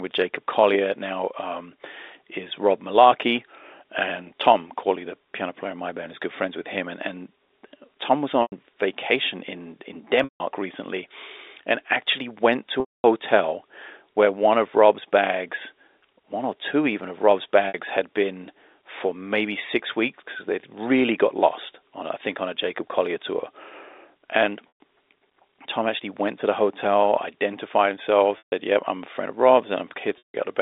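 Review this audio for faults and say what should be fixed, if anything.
Packet loss with pitch repetition breaks the audio at 8.42–8.52 s (before "vacation in in"), 10.24–10.40 s (before "recently and actually went"), 12.80–13.04 s (after it), 17.68–17.74 s, 24.76 s, 28.38–28.52 s and 30.18–30.34 s. Gaps of 60 to 240 ms are bridged by a held, buzzy repeated pitch period that fades to silence on the longer losses. The gap lengths fit runs of 20 ms packets. Adding jitter buffering and forward error correction on the network path would prevent these dropouts.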